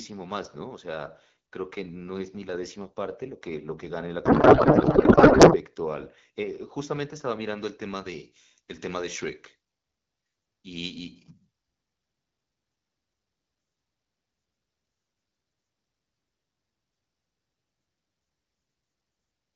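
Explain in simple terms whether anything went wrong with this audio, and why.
From 4.25 to 5.57 s the speech turns into garbled, warbling noise, a codec payload misread: the receiver unpacked the wideband AMR data using the wrong bit layout.

From 7.58 s to the end, the voice sounds thin, bright and hissy, because pre-emphasis was left on: the treble boost added for transmission was never undone.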